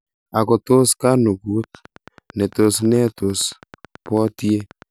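At 1.64 s a train of clicks starts and runs to 4.83 s, a steady ticking at about 9.1 clicks per second, so roughly thirty of them, all much the same shape and evenly spaced. They peak at about the level of the speech, so they sit right on top of it and tick away through the pauses too. Something was likely injecting a regular pulse, such as interference from nearby gear or a faulty connection or power supply.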